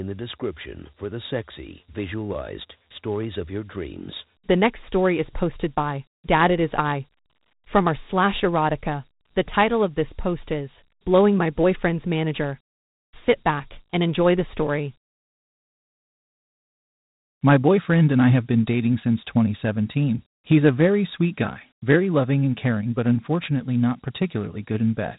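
From start to finish the speech carries Dialogic VOX ADPCM damage: coarse 4-bit step coding adds a gritty hiss that tracks the voice, and nothing survives above 3.8 kHz, fitting an 8,000-samples-a-second rate. A spectrogram shows a hard ceiling with grainy noise filling the band.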